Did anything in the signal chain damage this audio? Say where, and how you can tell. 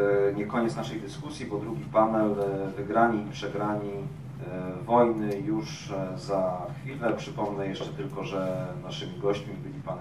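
No, nothing in the signal chain damaged this audio.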